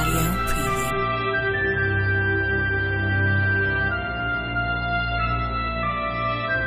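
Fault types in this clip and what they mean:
Adaptive stream at a lower bitrate: from 0.90 s to the end, the treble abruptly vanishes above about 5.3 kHz and the sound turns dull and swirly with codec artefacts, with no gap. This points to the player switching from roughly 128 kbit/s MP3 down to around 16 kbit/s.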